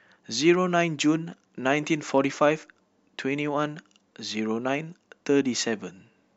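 No technical faults can be heard anywhere in the speech. Nothing in the recording calls for a timestamp or a repair.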